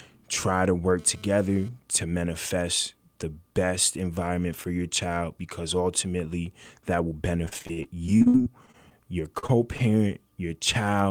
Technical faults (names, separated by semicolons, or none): GSM phone buzz; repeated packet loss (robotic sound); short concealed packet loss; short stall from a late packet